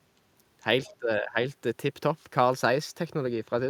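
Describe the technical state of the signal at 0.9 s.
At 0.9 s the speech is caught in double-talk suppression, from 0.88 to 1.39 s. It dips by about 15 dB in pieces totalling roughly a third of a second, likely because an echo canceller mistook it for loudspeaker echo.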